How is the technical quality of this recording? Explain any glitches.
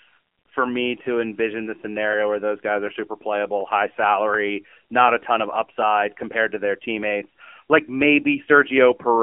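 Quality's poor, frankly: the whole thing has been squeezed through a phone line. Throughout the clip there's AMR narrowband mobile codec damage. The band stops at about 250 Hz to 3.4 kHz, nothing above, and the coder's vocal-tract model, starved of bits (it sounds like a low mode around 7.4 kbps), leaves the speech plainly buzzy and synthetic.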